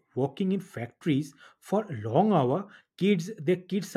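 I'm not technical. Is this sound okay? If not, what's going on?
Yes, this one's fine: nothing in the recording cuts out, jumps or sounds broken at any point.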